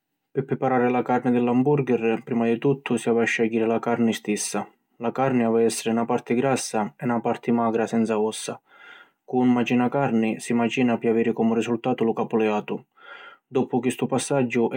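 The speech carries no audible technical faults.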